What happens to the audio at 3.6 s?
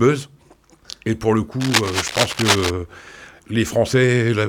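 Nothing goes wrong at 3.6 s; the audio plays through that moment intact, with no audible fault.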